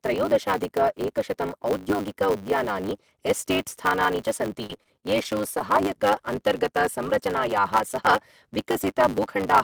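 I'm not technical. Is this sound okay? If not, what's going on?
No, there are two problems.

The first is a block size mismatch (truncated), and it runs through the whole clip. One step in the audio chain hands over chunks of sound that are longer than the next step accepts, so the end of every chunk is cut off. That leaves a steady buzz at about 100 Hz, and the speech plays about 1.16 times too fast while staying near its normal pitch. This pattern fits chunks of 512 samples being cut short.

The second is repeated packet loss (robotic sound), from 4.64 s to 5.61 s. Small pieces of the audio went missing over and over in that stretch, around ten short holes, the longest about 29 ms. Each hole was filled by stretching the sound just before it, and about 14% of that second is patched this way. The result is choppy speech with bits missing.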